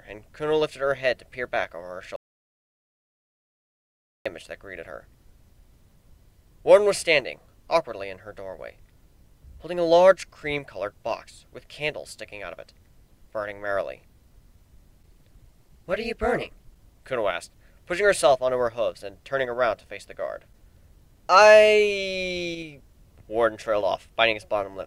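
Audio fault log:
2.16–4.26 s, audio dropout to silence: the sound cuts off mid-flow and returns 2.09 s later, the gap silent with no room tone beneath it. The input was likely lost, through a disconnected device, failed link or stray mute, while recording continued writing silence.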